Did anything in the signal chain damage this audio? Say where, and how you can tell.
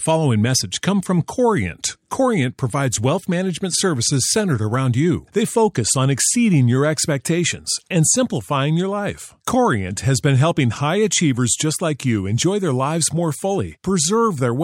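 No, nothing in this speech recording points to damage anywhere in the signal chain. No stage from capture through to playback leaves an audible mark on it.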